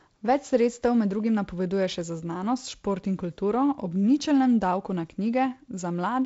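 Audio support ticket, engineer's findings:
No findings: the speech shows no faults, carried through G.722 wideband telephone coding at a rate that fits 48 kbit/s, with nothing above 7.7 kHz and a light codec hiss.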